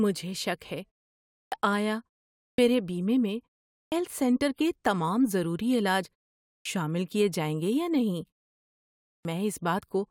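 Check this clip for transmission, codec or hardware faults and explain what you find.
The speech has one recurring fault, a clipped start after a pause, at 1.45, 2.51 (before "میرے بیمے میں"), 3.85 (before "سینٹر کے تمام ضروری"), 6.59 (after "کے تمام ضروری علاج") and 9.18 s. Each time, speech bursts out of silence with its opening 64 to 73 ms missing. The output device drops into a sleep state during gaps of 0.45 to 0.94 s and needs a moment to wake.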